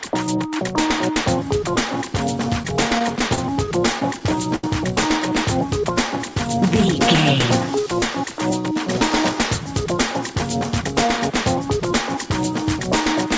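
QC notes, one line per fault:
2.63–4.64 s, repeated stalls (stutter): the playback buffer ran dry 12 times as packets arrived late, and each gap was filled by extending the last sound, the longest for 75 ms. About 200 ms was filled in and nothing was lost, so the sound catches and drags rather than dropping out.
6.30–6.82 s, jitter buffer slow-down: with its reserve running low, the receiver repeated single pitch periods to add 36 ms. The sound plays at 94% speed at unchanged pitch, so it is slightly drawn out and can waver a little.
9.84–12.25 s, jitter buffer speed-up: the buffer held more audio than its target, so the receiver trimmed short pitch-period slices, around 70 ms in total. The sound runs at 103% speed at unchanged pitch. The call codec passes nothing above 8 kHz throughout.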